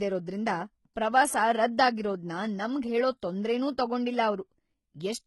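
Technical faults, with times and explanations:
Throughout, HE-AAC compression: the speech has treble up to a hard ceiling at 11.8 kHz, but s sounds come out gritty and lispy, likely from spectral band replication, where copied lower bands fill the treble instead of the originals. The heavy damage fits a very low bitrate, around 16 kbps. Unlike a plain low-pass, the top sounds bright but synthetic.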